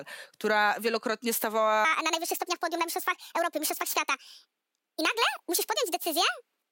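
At 1.85 s the speech jumps into a section at the wrong speed and stays there to the end, running about 1.52 times too fast. Pitch rises with it, roughly seven semitones, so everything turns high and rushed, likely from playback against a mismatched clock.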